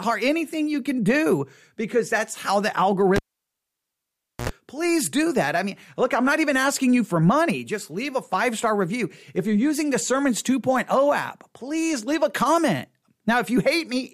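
At 3.16 s, just after "because that's how the", the cable pulled and plugged in breaks the signal path while it is live. There is a pop, then 1.28 s of near silence, 75 ms of 60 Hz mains buzz while only the tip touches, and a second pop before "please do that I" returns at 4.49 s.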